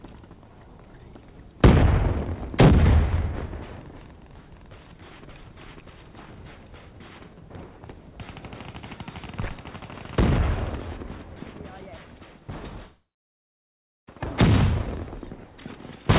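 At 12.83 s the sound breaks off and does not properly resume until 14.08 s. This is most likely a long network dropout. No audio reached the receiver for about 1.25 s. The receiver stretched the last sound into a buzz or hiss that fades quickly. About 1.05 s of near silence follows. When the audio returns, the lost stretch is simply gone. Across the clip, nothing above 4 kHz is heard, which fits a narrowband call codec.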